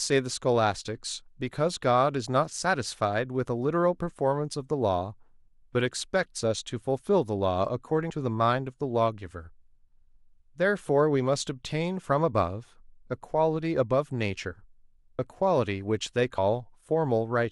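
Whole compressed frames were dropped or rejected as damaged in this speech recording, so playback jumps ahead a few tens of milliseconds at 8.09, 15.18 and 16.37 s.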